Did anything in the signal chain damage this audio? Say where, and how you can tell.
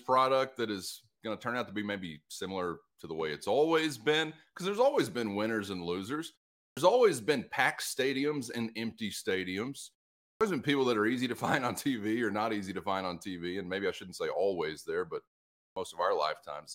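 Yes, clipped start after a pause at the playback device: speech after 0.4–0.5 s silences at 6.68, 10.31 and 15.68 s loses 84–98 ms while the sleeping output wakes.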